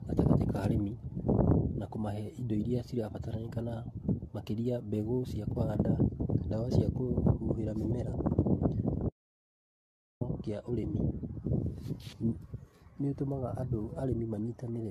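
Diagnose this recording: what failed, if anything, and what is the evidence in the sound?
Codec stage: throughout, the speech sounds swirly, smeared and hollow, with blurred attacks and nothing above 14 kHz. This is likely generation loss: roughly ten lossy passes, each re-quantising on a shifted frame grid, consistent with repeated AAC-LC encoding at about 64 kbit/s.

Capture or input path: from 9.09 to 10.21 s the speech cuts out mid-flow into about 1.1 s of digital silence with no room tone, then resumes abruptly. This points to an audio dropout to silence, with the input likely lost while the recorder kept writing zeros.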